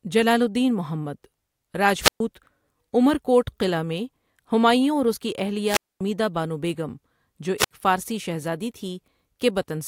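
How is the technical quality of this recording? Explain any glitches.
The recording is interrupted three times by wireless microphone squelch dropout, at 2.00–2.20 s, 5.66–6.01 s and 7.58–7.71 s. Each time the FM radio link fades, hiss briefly rises, then the receiver's squelch mutes the output for about 125, 240 and 65 ms before the speech returns.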